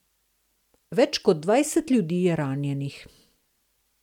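The speech signal shows no technical faults at any point.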